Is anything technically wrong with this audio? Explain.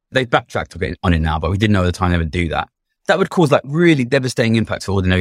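No, nothing in this speech recording stood out as a technical problem on listening.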